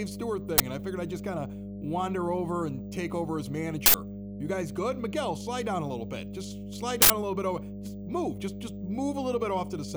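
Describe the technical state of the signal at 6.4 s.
A ground loop or nearby transformer is coupling the 50 Hz power line into the signal, so mains hum runs throughout, a steady low tone only slightly below the speech level.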